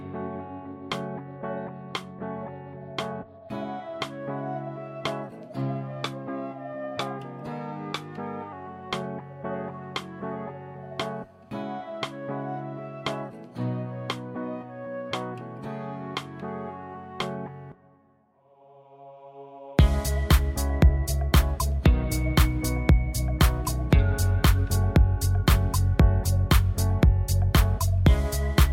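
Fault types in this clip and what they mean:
Wrong sample rate: from 5.53 to 8.53 s the sound runs 1.09 times fast and about 1.5 semitones high, which fits 44.1 kHz audio played at 48 kHz.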